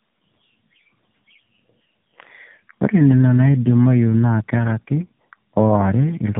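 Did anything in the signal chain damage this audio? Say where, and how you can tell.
Yes. The damage is at the codec stage and runs through the whole clip: tandem speech coding. The speech is rough, muffled and warbly, and nothing above 3.7 kHz survives. The artefacts point to two passes through an AMR-NB-type coder with a G.711 leg between them, one of them a low-rate mode around 6.7 kbit/s. Each border decodes the signal and codes it again, so the second coder works on the first coder's errors, and the losses add up.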